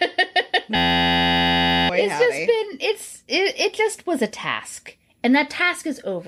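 A system hang loop hits this speech clip from 0.76 to 1.89 s. One 11.61 ms slice repeats nearly a hundred times, giving a steady 86.1 Hz buzz and losing about a second of speech. This fits a frozen driver cycling a 512-sample buffer.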